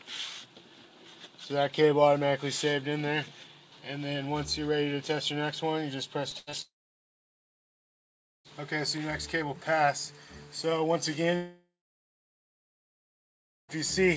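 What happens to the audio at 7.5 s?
A long network dropout runs from 6.62 to 8.48 s, so 7.5 s falls in its silent stretch. No audio likely reached the receiver for about 1.83 s. The receiver briefly stretched the last sound into a fading buzz, and then, for roughly 1.7 s, there is only silence. The audio resumes at 8.48 s with the lost portion simply gone, still band-limited below 8 kHz by the G.722 call codec.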